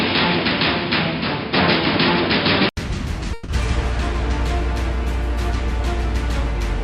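From 0 to 2.77 s the sound is band-limited, with nothing above 5.2 kHz, so it comes across dull and boxy. It carries its own steady noise floor, roughly 40 dB below the signal. At 2.77 s a silence of 80 ms occurs, then the full bandwidth returns and the level shifts by around 5 dB. This points to an input switched to a poorer device, likely another microphone or a headset call profile, before the system moved back to the better input.

At 3.33 s a call audio freeze begins and lasts until 3.50 s. The receiver's jitter buffer ran dry, likely because packets were delayed in transit, and the last sound was extended as a fading buzz or hiss for 150 ms rather than dropping to silence. When the packets arrived, playback continued where it had stopped, so nothing is lost. The sound after the freeze runs 150 ms later than before.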